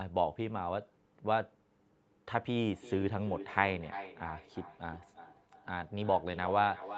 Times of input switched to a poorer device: none

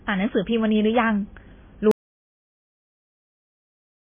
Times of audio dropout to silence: 1.91-4.02

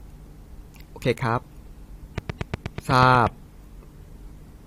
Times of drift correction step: none

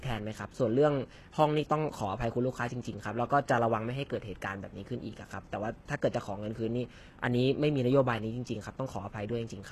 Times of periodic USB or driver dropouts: none

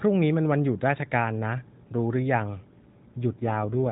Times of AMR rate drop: 3.32-3.92

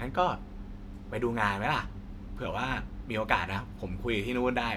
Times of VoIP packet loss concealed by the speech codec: none

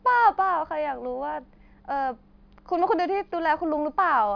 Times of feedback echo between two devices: none

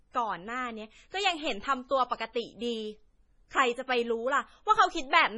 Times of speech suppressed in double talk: none

